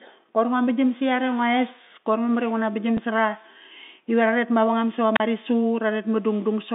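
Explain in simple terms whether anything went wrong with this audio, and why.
Packet loss with last packet repeated, at 2.97 s: for a moment the audio stream lost a small chunk of data on its way to the listener. Rather than leave a gap, the receiving end filled the hole by playing the previous chunk over again. That copy doesn't join smoothly with the speech around it, so you hear a small blip. The missing piece lasted about 10 ms, which points to a single lost packet.

Wireless microphone squelch dropout, from 5.15 to 5.2 s, right after "ive ra ret mavangam": the radio link between the wireless microphone and its receiver briefly weakened. When the signal got too faint, the receiver's automatic mute, called squelch, switched on to hide the static. For roughly 36 ms the sound drops to near silence, then the speech comes back. Throughout the clip, the narrow, phone-line tone comes from ordinary telephone coding.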